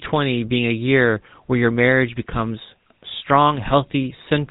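From the very start to the end, the speech runs through the GSM full-rate codec, and the damage is plainly audible. The codec builds the voice from a vocal-tract model excited by regularly spaced pulses, keeping only every third excitation sample, so there's a buzzy, gravelly roughness riding on everything. Nothing gets through above 4 kHz, leaving it dull and phone-like. The overall texture fits the 13 kbps rate of that codec.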